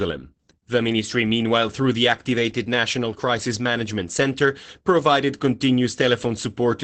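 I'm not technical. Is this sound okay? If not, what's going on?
No. Opus voice compression squeezed this speech hard, discarding everything above about 8.7 kHz, so from start to finish it sounds muffled, hoarse and slightly robotic.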